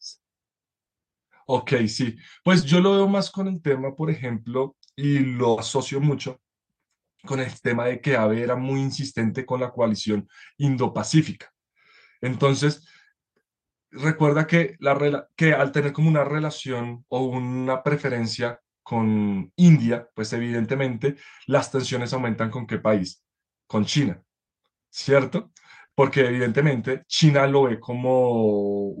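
A brief smear in the speech at 0.51 to 0.57 s, and again at 2.59 to 2.63 s and 18.53 to 18.57 s, is short concealed packet loss. A few tens of milliseconds of audio (40 ms at the first point, 20 ms at the other two) never reached the decoder in time. The receiver bridged each hole by extending the preceding sound, then blended back into the real signal.

At 5.51 to 5.59 s, a slightly longer held, fading sustain marks a burst of packet loss. About 60 ms of consecutive audio was lost or arrived too late to play. The receiver stretched the last sound across the gap while turning it down, and when playback resumed, the speech that fell inside that stretch was simply gone.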